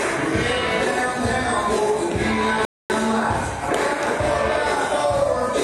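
At 2.65 s a rebuffering stall: playback starves, goes silent until 2.9 s, then resumes seamlessly, adding 0.25 s. The waveform and spectrogram show a flat, empty gap.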